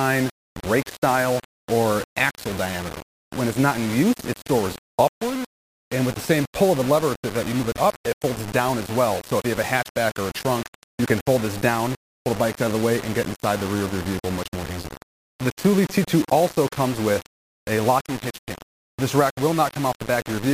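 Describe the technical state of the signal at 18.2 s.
Low bit depth without dither is present at 18.2 s, as it is across the whole clip. The sound is grainy, with an error floor only about 15 dB below the signal that follows the signal. This is likely rounding to very few levels without dither, consistent with about 5 bits.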